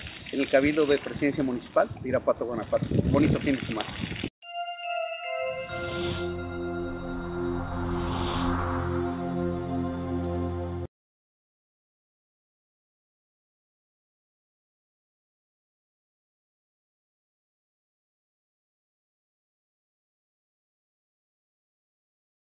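Nothing is technically wrong with the audio in this clip.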